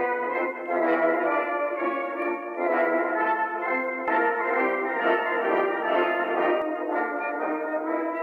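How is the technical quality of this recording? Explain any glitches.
The recording has one technical fault. From 4.08 to 6.62 s there is a doubled audio track: a second, equally loud copy trails about one second behind, with no decay or room colour, and it starts and stops abruptly. It is likely caused by a slower duplicate capture path or an edit holding two misaligned copies.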